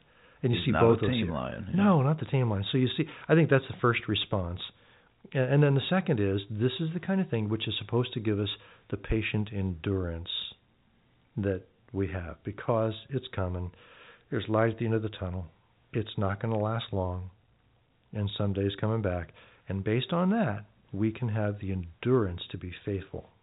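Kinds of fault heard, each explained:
No faults heard; the speech comes through the telephone-band G.711 coding, capped at 4 kHz, with nothing beyond that.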